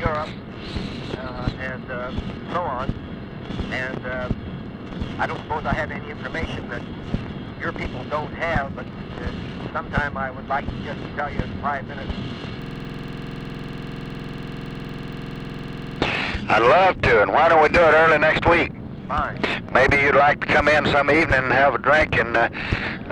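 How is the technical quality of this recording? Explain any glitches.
The recording has one serious glitch, a system hang loop from 12.62 to 15.99 s. The computer or audio driver stalled while the sound hardware kept replaying its ring buffer, which fits a 2048-sample buffer. A 46.44 ms slice repeats exactly, producing a rapid, rattling stutter at 21.5 Hz.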